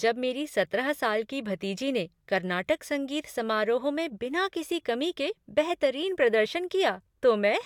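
Nothing goes wrong anywhere in this bit of speech, so there's no technical fault to point out.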